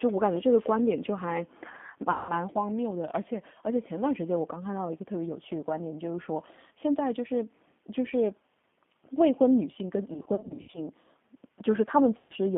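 This speech clip passes end to end through a G.729 codec at 8 kbit/s, which rebuilds the voice from a vocal tract filter, a pitch predictor and a few pulses per frame, inside a telephone band of about 150 Hz to 3.5 kHz. The result is plainly rough and synthetic, with nothing bright above the band. VoIP packet loss concealed by the speech codec then strikes three times. About 180 ms is lost around 2.11 to 2.34 s, 300 ms is lost in short bursts scattered across 10.14 to 10.79 s, and 120 ms is lost around 12.18 to 12.33 s. Each time, the decoder stretches its last pitch and filter into a fading buzzy tone or coloured noise, and the voice stays weak as it recovers.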